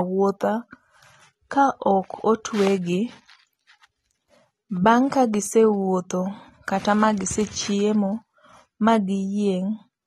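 From start to finish the speech is dull and audibly smeared, with nothing above 13.8 kHz and a fizzy, warbly edge on sibilants. That's likely AAC compression, AAC-LC at what sounds like a low bitrate, around 32 kbps, quantising away the top end.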